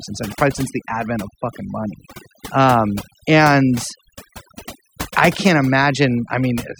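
From start to finish, overdone noise removal strips bands near the noise estimate, leaving a lowered background that breaks up into twinkling specks.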